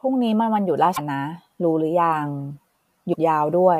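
Damaged data in a compressed stream shows up twice in this speech, from 0.93 to 0.99 s and from 3.10 to 3.16 s. Corrupted bytes make the decoder misread frames and lose sync until it finds the next header, leaving a brief glitch of about 60 ms each time.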